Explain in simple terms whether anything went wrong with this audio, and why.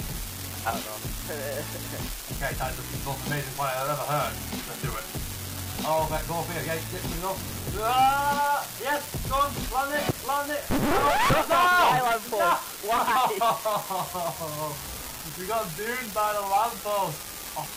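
Something did go wrong: an unreliable data bit. One line carrying the digital samples is flaky, so its bit comes out wrong at random moments. Each mistake adds an identical small jump, heard as a steady crackle or fizz from start to finish, even during pauses.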